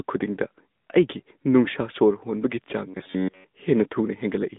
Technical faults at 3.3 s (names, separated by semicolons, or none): AMR narrowband mobile codec; robotic sound from repeated short buffers